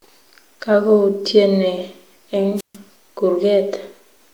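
At 2.56 s there's a wireless microphone squelch dropout that runs to about 2.77 s. The radio link from the transmitter fades, hiss creeps up briefly as the signal weakens, and then the receiver's squelch slams the output shut. You get a hole of near silence lasting about 140 ms before the speech comes back. It's the classic sound of an analogue FM mic losing its carrier for a moment.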